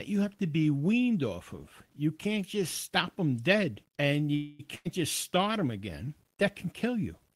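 Throughout the speech there is a grainy, gritty edge that follows the signal. It roughens quiet passages and makes the softest moments sputter rather than decay smoothly. This is low bit depth without dither, likely from rounding to very few levels, which fits roughly 10-bit resolution. The error sits about 45 dB below the signal. On a waveform, quiet stretches show visible stair-steps. A spectrogram shows a signal-dependent noise floor that rises and falls with the speech instead of staying constant.

From 4.35 to 4.61 s the sound stalls into a held, fading continuation of the last sound lasting about 240 ms. It never drops to silence. The speech then carries on exactly where it stopped, so nothing is lost, but everything afterwards arrives later. This is a call audio freeze, likely caused by packets arriving late and the jitter buffer running dry. A spectrogram shows the last sound smeared and fading across the gap. 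The waveform shows a decaying stretch.

Shortly after, from 4.75 to 4.87 s, a burst of packet loss removes about 100 ms of speech. The receiver fills the hole with a held, dimming continuation of the last sound, and the speech resumes further on with the intervening part missing. On a spectrogram the last sound stretches flat and fades, then jumps to new content. The waveform shows a shrinking, repetitive segment followed by a sudden change.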